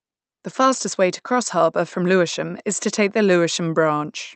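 Speech recording with no technical faults to report.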